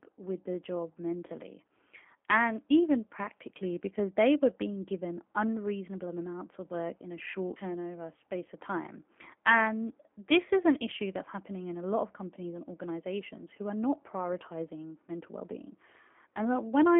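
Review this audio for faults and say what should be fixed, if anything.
G.729 codec damage runs throughout the speech, plainly audible. The sound is confined to roughly 250 Hz to 3.4 kHz and takes on a rough, synthetic edge, because each 10 ms frame is rebuilt from a vocal tract filter, a pitch predictor and a few pulses, which fits an 8 kbit/s G.729A stream. To prevent it, capture or route the call through a wideband codec such as G.722 or Opus instead of G.729.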